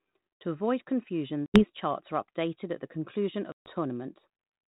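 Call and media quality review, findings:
Packet loss on an ADPCM call, 1.46–1.64 s: hard-edged dropout of about 80 ms (roughly four packets' worth), filled with silence. Resumed speech is slightly distorted and settles within tens of ms. Waveform shows a flat gap with abrupt edges. Spectrogram shows a blank vertical band.

Packet loss on an ADPCM call, 3.52–3.71 s: longer silent hole, about 140 ms (roughly seven packets' worth). Same slight distortion and tens-of-ms settling on re-entry.

Mechanism: the decoder's adaptive predictor and step size desync from the sender across each gap. G.726 ADPCM at 32 kbit/s, light codec damage, band-limited to 4 kHz.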